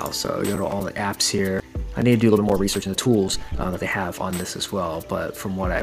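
From 2.21 s to 4.29 s there's a time-stretched section: the audio suddenly runs at about 1.65 times its normal pace, then drops back. The pitch doesn't rise with it, so it comes across as rushed rather than chipmunky. That combination points to software squeezing the passage to fit a shorter length, most likely by cutting out short slices to keep the pitch where it was.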